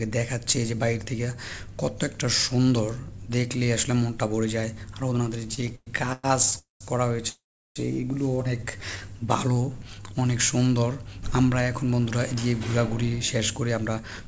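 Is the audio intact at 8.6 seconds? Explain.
No. From 8.60 to 10.15 s a jitter buffer slow-down stretches the audio by 168 ms, to about 90% speed, as the receiver repeats single pitch periods to rebuild its reserve. Sounds drag at unchanged pitch, unlike a tape-style slowdown, which would also lower the pitch.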